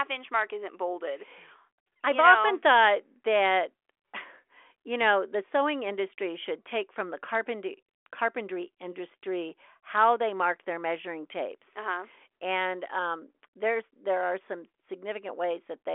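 Speech clip with no technical faults, band-limited to a telephone line's 300 to 3400 Hz with nothing above 3.8 kHz.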